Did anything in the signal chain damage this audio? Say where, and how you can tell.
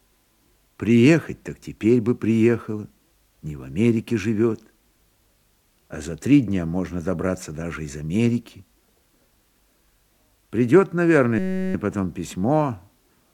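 Yes. A system hang loop at the driver/buffer stage runs from 11.39 to 11.74 s: a 5.33 ms slice repeats 67 times, producing a steady 188 Hz buzz. This fits a 256-sample ring buffer replaying while the host stalled, with little audio lost.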